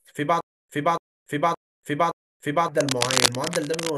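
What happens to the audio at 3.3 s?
At 3.3 s you're in cable scratch noise, running from 2.79 to 3.90 s: a likely worn cable or connector shifting, throwing rough crackly rustle about as loud as the speech.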